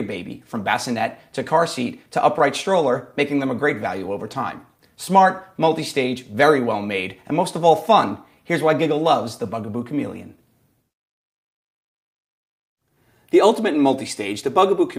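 Throughout the clip the timing feels faintly unsteady, with small hiccups at uneven intervals rather than any single obvious break. That points to clock drift between sender and receiver. The sending clock runs about one and a half percent slow, so the receiver's jitter buffer keeps draining and has to be propped up to avoid running dry. The result is a persistent, low-level wobble in pacing.

From 1.54 s to 14.61 s the sound plays back slightly stretched, at roughly 99 percent speed, with brief repeated slivers spaced irregularly. These are repeated timing corrections: the receiver repeats short pieces, always in the same direction, to stay in step with the slower sender. Together they add something like 150 ms over that stretch, heard as a mildly dragging tempo with occasional tiny stutters.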